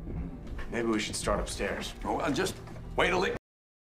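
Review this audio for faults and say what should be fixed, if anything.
The sound ends with a cut-off end at 3.37 s: it stops mid-event and drops straight to digital silence for the remaining half second or so. The final buffers were never written or played out, so the waveform simply ends without any natural decay. A fade-out or a noise gate would instead show a gradual level drop or a short release tail. Here the signal is present one instant and absent the next, with pure silence afterwards rather than room tone. To prevent it, flush and write all pending buffers before closing the file or stopping playback.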